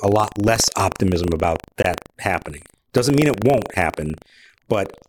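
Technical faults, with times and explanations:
Throughout, buffer tearing: a steady robotic rattle at 25 Hz sits under the speech and drops away whenever the signal stops. The writing side of the ring buffer and the reading hardware have drifted so that they cross inside every 40 ms period. A small slice of each period, a few percent, is replayed audio from roughly a tenth of a second earlier. The hard joins on either side of that stale slice repeat at the buffer rate and produce the buzz.
1.83 s, gap at a join of encoded pieces: right after "lot less optimism about", the speech drops out for 19.4 ms and then resumes exactly where it stopped. The audio was encoded as separate pieces and butted together without trimming. The encoder's start-up delay and the padding in the last frame of the earlier piece both remain as a short hole of silence. The codec smears its edges, so the truly silent part is shorter.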